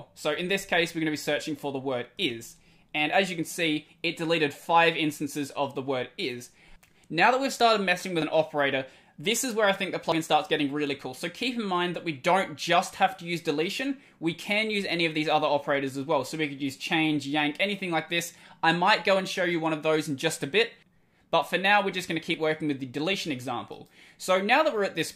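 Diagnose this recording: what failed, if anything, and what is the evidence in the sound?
Dropped buffer (overrun) at 8.22, 10.12, 22.34 and 23.14 s: jumps where the sound skips ahead, likely capture-driver buffers overwritten before being read.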